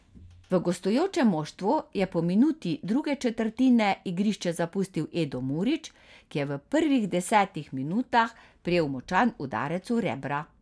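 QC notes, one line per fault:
No faults heard in this speech recording.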